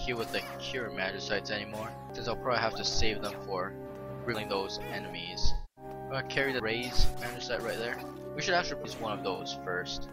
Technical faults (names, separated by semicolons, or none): audio missing between chunks; AAC frame loss with concealment